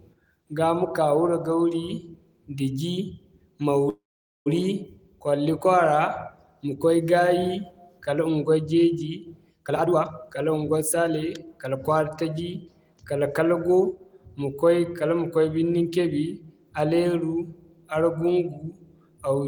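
A speech recording with two timing faults. From 3.89 to 4.48 s there is a call audio freeze: the last sound smears on as a brief fading buzz or hiss, then about 460 ms of silence before speech resumes where it stopped, so nothing is lost but the delay grows by 565 ms. The likely cause is packets held up in transit, draining the jitter buffer. On a waveform this is a short decaying tail dropping to a flat line; a spectrogram shows a smeared, fading band, then a blank gap. From 9.64 to 12.23 s a jitter buffer speed-up plays the speech at 122% of normal rate at unchanged pitch, sounding hurried, as the receiver trims short pitch-period slices, roughly half a second in all, to shed excess buffered delay. A spectrogram keeps its harmonic spacing while syllables and pauses are squeezed horizontally; the waveform's periods look the same but there are fewer of them.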